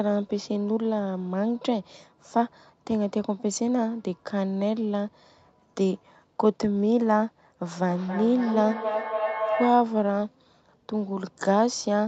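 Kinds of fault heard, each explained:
Feedback howl: Two devices on the same call share a room, so the loudspeaker's output re-enters the microphone and the loop gains level on each pass. The sound narrows into a rising tone around 700 Hz, pulsing roughly every third of a second and peaking about 3 dB below the speech.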